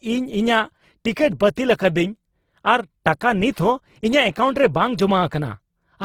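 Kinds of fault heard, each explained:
Opus compression: present throughout the speech, with plainly audible damage that sounds like a low-rate Opus encode in its CELT music mode, which fits a rate near 16 kbps. That mode holds each band's overall energy but has too few bits for fine detail, so it fills bands with folded copies of lower ones or with noise. Here that makes voiced sounds grainy and rough rather than swirly, while the band stays fullband, reaching about 20.2 kHz.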